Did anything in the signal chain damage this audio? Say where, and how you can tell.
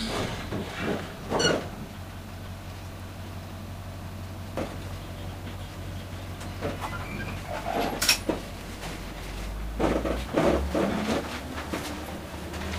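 No, nothing in the signal chain audibly damaged this sound.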